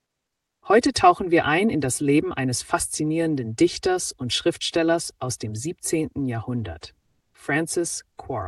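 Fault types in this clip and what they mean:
Channel delay (comb filtering), throughout: one channel arrives roughly 3 ms behind the other, and when the two are combined to mono, whatever they share cancels at a series of evenly spaced frequencies, the first near 200 Hz. Those fixed notches stay put for the whole clip, so the sound comes across hollow and phasey, with a thinned colour that doesn't change as the material changes.
Comfort noise in place of the background, 7.00 to 7.34 s: for about 340 ms the genuine background, which sits roughly 55 dB below the loudest parts, gives way to a smooth, featureless synthetic hiss with none of its original texture, and the level shifts by about 3 dB. The sender appears to have stopped transmitting during the pause, leaving the receiver to fill the gap with generated noise, most likely through Opus discontinuous transmission.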